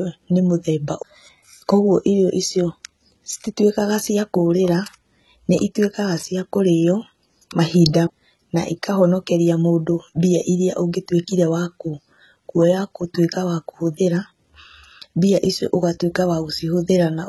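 A speech recording carries heavy codec damage throughout: sibilants sound gritty and metallic, and nothing is present above 11.8 kHz. This is likely HE-AAC compression at a very low bitrate, around 16 kbps. On a spectrogram the treble looks copied upward in repeated blocks with a hard ceiling. A CD skip occurs from 8.07 to 8.09 s, heard as a tick and a short mute of a few tens of milliseconds before playback resumes from a different point. In the waveform this appears as a near-flat gap with abrupt edges.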